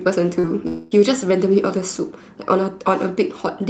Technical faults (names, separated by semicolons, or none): short concealed packet loss; long network dropout